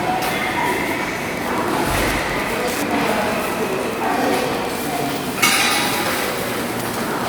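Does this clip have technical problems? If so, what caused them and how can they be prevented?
Yes. From 1.33 s to the end of the clip there is Wi-Fi interference: a steady ticking about ten times a second, sitting roughly 20 dB below the wanted sound. A nearby Wi-Fi radio's beacon, repeating every 102.4 ms, is being picked up and rectified by the audio circuitry, turning each radio burst into an audible click. On a spectrogram this appears as thin, evenly spaced vertical broadband lines about 0.1 s apart; the waveform shows a regular train of small spikes. To prevent it, keep Wi-Fi routers and phones away from the microphone, cables and interface, and use shielded, balanced cabling.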